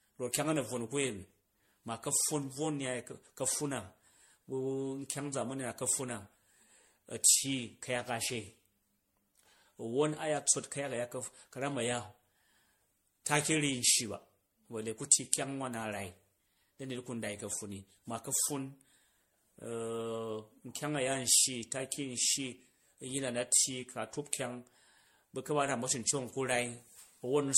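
From start to finish the speech sounds swirly, hollow and smeared, with blurred consonant attacks and nothing above 16.5 kHz. That's generation loss, likely from about seven MP3 re-encodes at around 64 kbit/s, each pass adding fresh quantisation noise and spectral holes.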